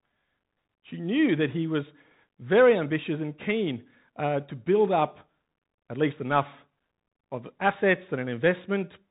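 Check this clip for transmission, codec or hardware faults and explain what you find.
One fault runs through the whole clip: the Bluetooth CVSD headset codec. It encodes one bit per sample, stepping up or down with an adaptive step, which fits a 64 kbps CVSD link. The spectrogram stops flat at 3.8 kHz. Fast, loud transients outrun the step, leaving plainly audible scratchy s sounds and slope-limited, rounded waveform edges, with a granular hiss under the speech.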